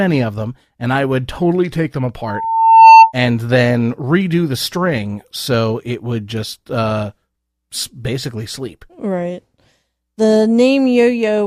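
Between "would totally take them" and "and then redo the", from 2.25 to 3.13 s, a loudspeaker feedback squeal builds: the microphone re-amplifies its own loudspeaker output, so one 898 Hz tone swells over most of a second to roughly 15 dB above the speech. Unlike a steady interfering tone, it grows on its own.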